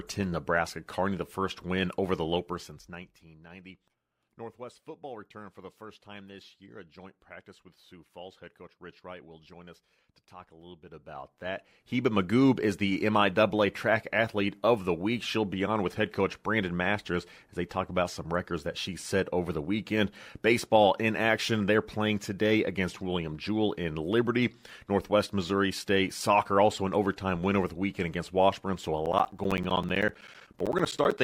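Right near the end, from 29.06 to 31.18 s, you get periodic USB or driver dropouts: roughly 10 ms gaps of silence every 64 ms, about thirty of them, as something stalls the audio path. It sounds like a fast, even ticking riding on the sound.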